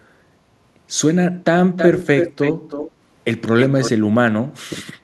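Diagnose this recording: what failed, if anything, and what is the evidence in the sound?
Echo leak, at the call-processing stage: from 1.76 to 2.91 s and again from 3.59 to 3.91 s, a delayed copy of the speech trails the original by about 318 ms, roughly 5 dB below it in the first stretch and about 10 dB down in the second. The likely cause is a far-end echo canceller letting loudspeaker pickup through. On a spectrogram the harmonic bands repeat, shifted right by about 0.32 s; the waveform shows smeared, doubled envelopes.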